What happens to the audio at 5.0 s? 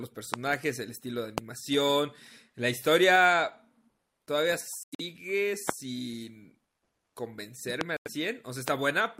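Right around there, from 4.83 to 5.01 s, the speech drops into dead silence for about 175 ms. That's a corrupt frame muted fault: some compressed frames got bit errors, the decoder rejected them, and the player filled the gap with silence. The hole opens abruptly, and its length fits a run of about seven codec frames. Timing holds, so the speech resumes right on schedule afterwards.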